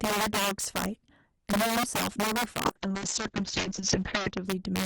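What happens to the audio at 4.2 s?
A call bitrate drop is under way there. It runs from 2.67 s to 4.51 s. The bandwidth estimate fell, so the encoder went from 32 kbps down to 6 kbps. At 4.2 s it is at that lowest rate, which lasts about 1.66 s. The coding is coarse. The top of the band is also cut from 20 kHz to 8 kHz. The speech sounds muffled, rough and watery.

Integer overflow is also present, as it is through the whole clip. The signal is driven about 8 dB past full scale. A small share of samples, a few percent, goes over the limit. They are not clamped. Instead they wrap to the opposite sign and jump across the full range. Loud syllables at this point get sharp, violent cracks. These are harsher than ordinary clipping.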